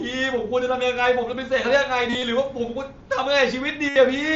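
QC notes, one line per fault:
2.10–2.23 s and 3.89–3.96 s: concealed Bluetooth headset packet loss. Lost headset packets were patched with repeated recent waveform. This gives brief buzzy held tones, then a slight warble as real sound returns.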